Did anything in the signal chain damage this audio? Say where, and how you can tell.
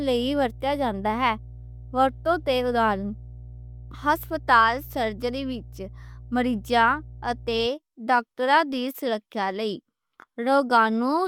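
Yes. Mains hum entered at the analogue wiring stage: a steady 60 Hz tone sits under the speech from the start until 7.66 s, roughly 20 dB below it. A ground loop or nearby transformer coupled the power line into the signal path.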